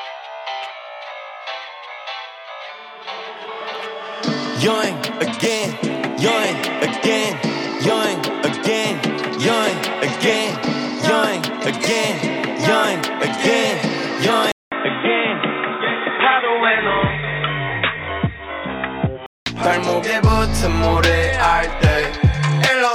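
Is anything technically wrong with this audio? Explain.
Yes. From 14.52 to 19.46 s, after a 200 ms silence, the sound turns dull and boxy with nothing above 3.8 kHz. The input likely switched to a poorer device. A spectrogram shows the upper band vanishing and a new noise floor around 30 dB down, while the waveform level stays about the same.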